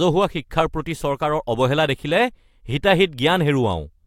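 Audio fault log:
Nothing stood out on listening to the speech.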